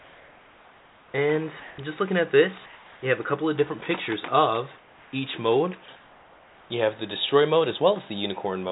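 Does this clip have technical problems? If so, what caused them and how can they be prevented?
Yes. Comfort noise in place of the background occurs at 0–1.14 s, 1.6–1.78 s, 2.66–3.02 s, 4.78–5.12 s and 5.96–6.7 s. In each gap the real background turns into flat, featureless hiss, mostly about 3 dB quieter, though about 1 dB louder around 1.6 s. The likely cause is discontinuous transmission: the sender stops sending during pauses, and the receiver fills them with synthetic noise. Disabling DTX on the sending side keeps the genuine background in every pause.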